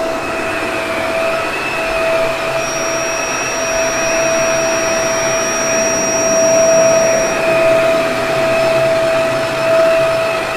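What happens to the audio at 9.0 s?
At 9.0 s the audio is inside a time-stretched section running from 8.79 s to 10.57 s, where the pace jumps to roughly 1.7 times normal while pitch holds steady. Software likely squeezed this stretch by dropping short slices and joining the rest, so it sounds rushed. On a spectrogram, events crowd closer together in time with harmonic bands unshifted.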